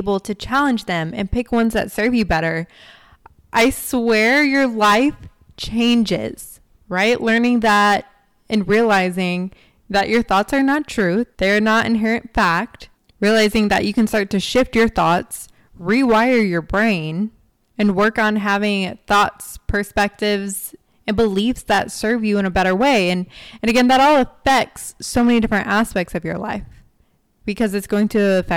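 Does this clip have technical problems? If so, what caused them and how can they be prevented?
Yes. Hard clipping runs through the whole speech clip: the signal was driven about 12 dB past what the converter or gain stage could pass, so roughly one sample in twenty is cut flat, giving harsh fuzz on every loud syllable. Set input gain lower, leaving headroom below full scale.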